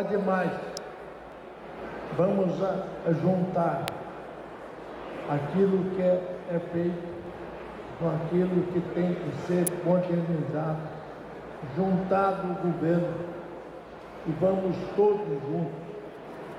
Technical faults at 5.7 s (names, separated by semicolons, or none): none